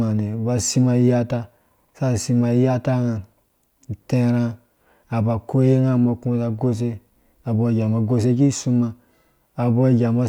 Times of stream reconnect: none

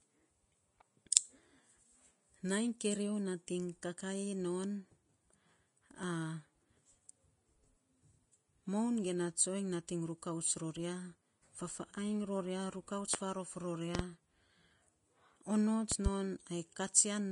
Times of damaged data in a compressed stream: none

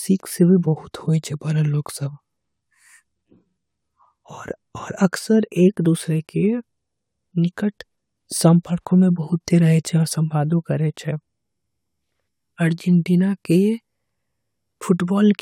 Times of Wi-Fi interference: none

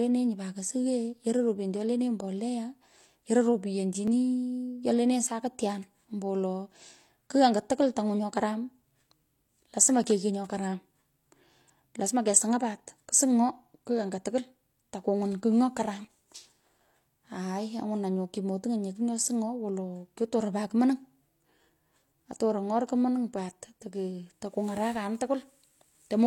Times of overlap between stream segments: 4.07-4.11, 10.04-10.07, 16.05

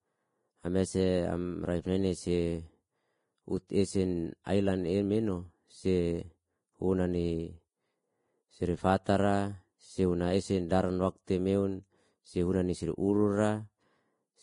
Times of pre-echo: 3.68-3.70, 4.44-4.46

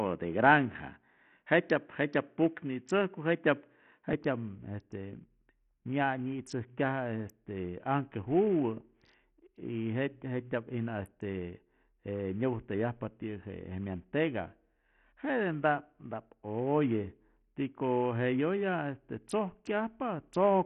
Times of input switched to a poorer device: 0.00-4.13

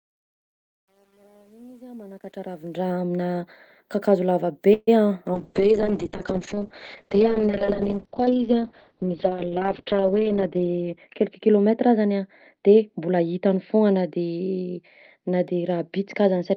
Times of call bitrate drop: 5.35-16.57

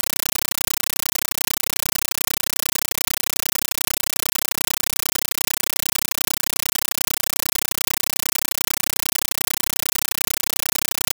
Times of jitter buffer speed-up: none

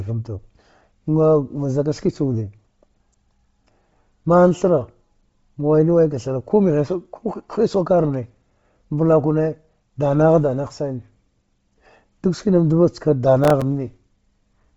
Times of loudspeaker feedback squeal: none

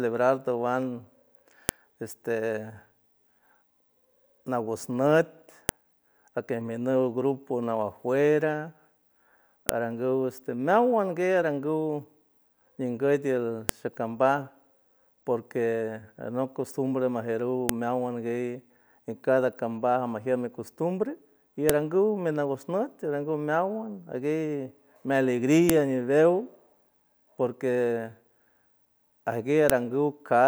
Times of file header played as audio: 1.69, 5.69, 9.69, 13.69, 17.69, 21.69, 25.70, 29.70

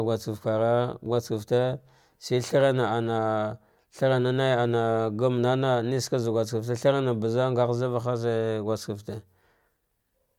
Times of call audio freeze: none

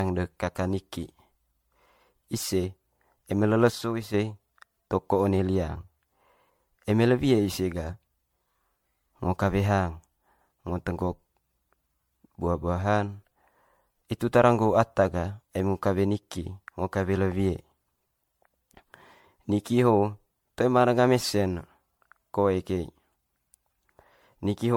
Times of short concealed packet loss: none

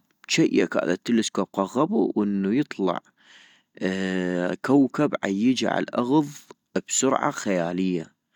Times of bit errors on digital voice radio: none

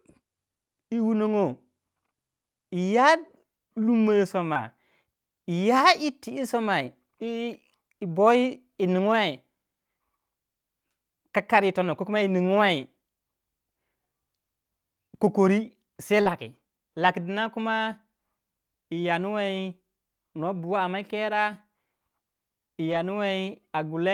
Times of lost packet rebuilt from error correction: 4.55, 16.25-16.35, 17.03-17.09, 22.91-22.97

